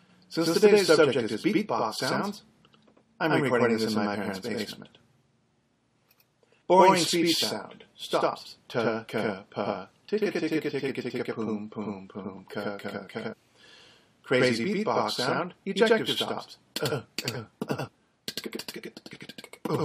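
From the start and throughout, a channel delay (doubling) is present: one channel lags the other by about 93 ms, which fits a 4096-sample buffer, and the mono sum plays every onset twice at equal level as a slap echo. A waveform shows each transient repeated 93 ms later.

Damaged data in a compressed stream then breaks the sound at 6.61 s, from 13.32 to 13.34 s, and at 17.87 s. Each time, the decoder misreads corrupt frames and resyncs, giving a brief chirp or blip. On a spectrogram these appear as thin, broadband vertical smears.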